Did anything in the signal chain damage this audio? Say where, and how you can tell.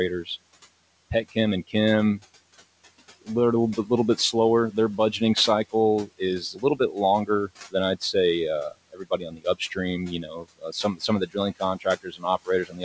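Yes. The call-processing stage damaged it. Throughout, the noise suppressor lowers the background by about 16 dB between phrases and lets it swell back under speech. These are noise suppressor artifacts. On a spectrogram the room-noise floor, which sits about 18 dB under the speech, shows as speckled, blotchy patches that appear and vanish frame by frame. The G.722 path's empty band above 8 kHz is a separate, normal feature.

Speech cut by the noise suppressor also occurs in three places. At 6.53 to 6.8 s, right after "budgeting cycle is", about a tenth of a second dips by about 9 dB. From 8.93 to 9.77 s, roughly 400 ms is pulled down by up to about 17 dB. From 10.23 s to the end, the drop reaches about 18 dB. The suppressor misread low-level speech as noise, so the waveform envelope sags there and the spectrogram's speech energy goes faint.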